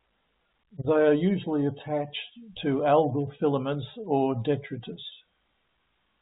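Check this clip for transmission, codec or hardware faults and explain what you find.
No faults found.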